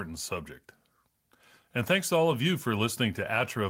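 No technical faults can be heard in this speech.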